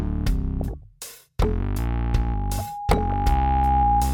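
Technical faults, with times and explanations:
0.61–0.83 s and 2.97–3.13 s, DAB burbling: Two short bursts of burbling sit over the sound. Weak reception lets bit errors slip past error correction into the MP2 data, so corrupted samples add short blips of noise in single sub-bands and corrupted scale factors make individual sub-bands leap in level for up to a frame. The error rate is a few per thousand bits in the first burst and roughly half that in the second. A spectrogram shows scattered rectangular blocks flaring in narrow bands, each up to one frame long. The waveform shows irregular bursty jumps.
1.78 s to the end, loudspeaker feedback squeal: A tone at 821 Hz rises steadily over about two seconds into a squeal that ends up about 5 dB above the programme, still sounding when the clip stops. The microphone is hearing its own loudspeaker, and at this one frequency the loop gain exceeds one, so it keeps reinforcing itself. 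On a spectrogram it is a single bright horizontal line at 821 Hz growing in intensity. The waveform shows a swelling sinusoidal envelope.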